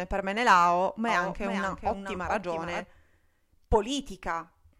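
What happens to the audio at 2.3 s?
A doubled audio track runs from 1.08 to 2.84 s: a copy about 5 dB quieter trails roughly 400 ms behind, likely from a second, slower capture path, appearing as a fainter, full-band shifted duplicate on the spectrogram.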